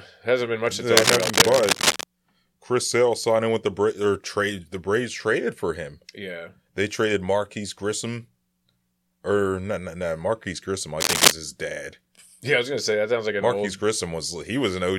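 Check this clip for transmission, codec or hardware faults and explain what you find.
Two bursts of cable scratch noise occur in the speech, from 0.97 to 2.04 s and from 11.0 to 11.32 s, just before "his dad". A worn connector or cable being moved is the likely cause, with its contact resistance jumping erratically. The result is scratchy rustling a little louder than the voice. On a spectrogram it shows as dense broadband smears, and on the waveform as ragged spikes.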